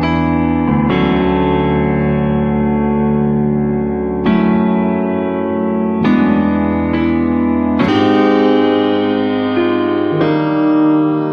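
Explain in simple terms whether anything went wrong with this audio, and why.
From 7.88 s to the end at 11.32 s, the sound suddenly turns higher and more hurried, as if someone pressed fast-forward. Everything in that stretch runs 1.4 times faster than normal and sits roughly five semitones higher. This is a section at the wrong speed. The likely cause is that this part was played back or edited against the wrong clock, so it ran too quickly and its pitch rose along with its tempo.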